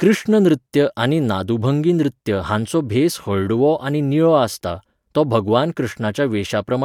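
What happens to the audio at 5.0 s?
Nothing goes wrong at 5.0 s; the speech continues cleanly through that moment with no dropout, click, distortion or other audible fault.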